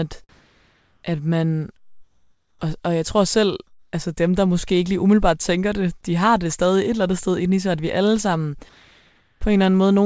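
Four pauses in the speech lose their natural room sound and fill with a flat, even hiss instead: 0.29 to 1.03 s, 1.77 to 2.61 s, 3.67 to 3.93 s (between "og jeg tror selv" and "altså dem der måske"), and 8.69 to 9.41 s after "at vi alle sammen". This is comfort noise in place of the background. The likely cause is discontinuous transmission, where the sender stops sending during silence and the receiver synthesises a rough imitation of the quiet background, which sits about 36 to 48 dB below the loud passages here. The first gap matches the real level, while the others drop by about 3, 6 and 2 dB.

At 9.4 s, where the last gap ends, speech snaps back in with a hard edge, and roughly 20 ms of its soft beginning is missing. This is an onset clipped by the voice detector. The likely cause is that the detector reacted a moment late, so those first milliseconds were never sent and synthetic noise covered them. 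Throughout the clip, the call codec's band limit leaves nothing above 8 kHz.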